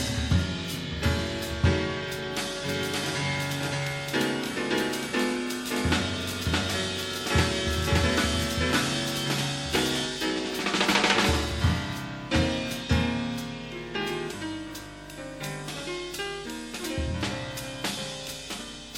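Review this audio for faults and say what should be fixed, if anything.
A second, slower capture path was likely mixed in, creating a doubled audio track from 2.69 to 10.05 s. An unprocessed full-band copy trails by about half a second at roughly equal level, starting and stopping abruptly. Prevention: route the source through only one capture path, or mute the monitor return feeding the recorder.

A compressed frame was written or sent twice, causing repeated frames at 6.20 s. One 46.4 ms block plays again as a brief stutter, adding 46.4 ms. Prevention: deduplicate frames by sequence number or timestamp before decoding or writing the file.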